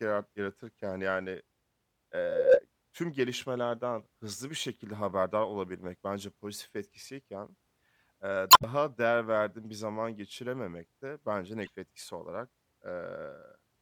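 A short glitch breaks into the speech from 8.50 to 8.64 s, and a briefer blip follows from 11.64 to 11.70 s. Both are damaged data in a compressed stream: corrupted bytes made the decoder misread frames and lose sync until it found the next frame header.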